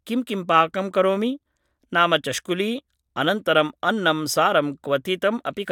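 No technical faults are audible.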